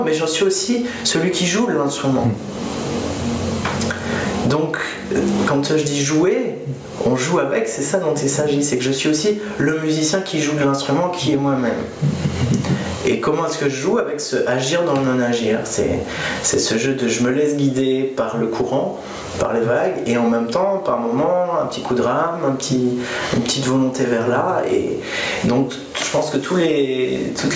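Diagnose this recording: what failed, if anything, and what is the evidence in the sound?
Gain pumping throughout, at the input stage. The gain swings about 25 dB. Likely cause: excessive gain clamped by a fast limiter.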